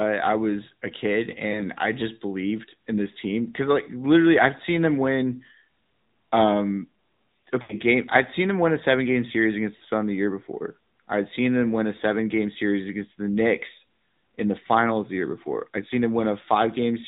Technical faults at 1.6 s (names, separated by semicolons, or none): AMR narrowband mobile codec; lost AMR speech frames